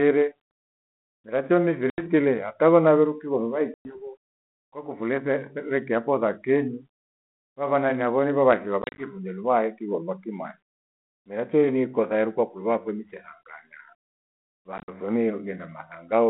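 Packet loss on an ADPCM call drops stretches of the speech to silence, and the decoder's adaptive predictor and step size then lose track of the sender's, so each hole ends with a brief, slightly distorted return. Solid gaps of 80 ms at 1.90 s and 110 ms at 3.74 s give clean cuts; at 8.82 s and 14.78 s, 100 ms and 80 ms are scattered in short bursts, sounding choppy, across a band-limited line consistent with 32 kbit/s G.726.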